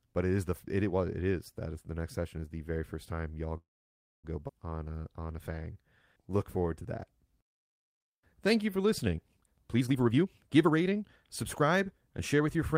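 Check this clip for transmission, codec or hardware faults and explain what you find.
The speech clip has four network-related faults, all from network delivery and a struggling jitter buffer.

Call audio freeze, 3.57 to 4.25 s, right after "very first time y'all". The audio stalls for about 0.66 s, mostly silent. Delayed packets likely emptied the buffer.

Skip ahead, 4.47 to 4.51 s. About half a second of speech is dropped. The audio was lost in transit or discarded by an overfull buffer, so playback jumps forward almost seamlessly.

Jitter buffer slow-down, 4.77 to 9.44 s. Speech plays at 92% speed, same pitch, with 389 ms added by repeating pitch periods. Sounds stretch and drag.

Jitter buffer speed-up, 9.52 to 12.75 s. Speech runs at 115% speed. Around half a second of short pitch-period slices is removed to cut delay. It sounds hurried.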